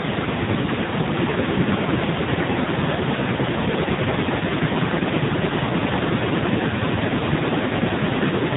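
Speech clip with AMR narrowband mobile codec damage throughout. Nothing above 4 kHz survives, and heavy buzzy, synthetic coding fits a low 5.9 kbps AMR-NB mode.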